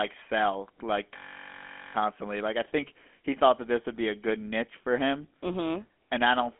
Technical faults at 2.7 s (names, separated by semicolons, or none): GSM full-rate codec